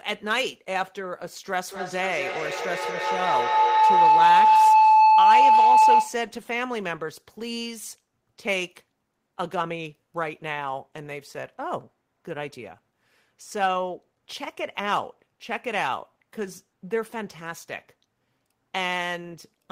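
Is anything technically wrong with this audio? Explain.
Yes. From 1.66 to 6.34 s there is feedback howl: the microphone picks up a loudspeaker carrying the same call, and each trip around that loop comes back louder. It narrows into a tone of roughly 1 kHz, with the loop repeating about every fifth of a second, and peaks at about 11 dB above the speech. Unlike an acoustic echo, whose repeats die away, these repeats grow into a sustained pitched howl.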